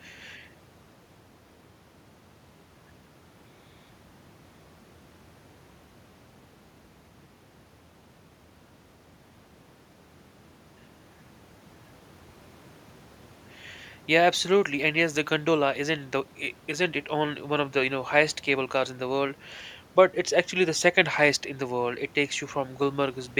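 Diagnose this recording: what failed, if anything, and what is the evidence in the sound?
Nothing failed in this recording, and the only thing the sound gives evidence of is the room's own background noise, sitting about 31 dB below the speech.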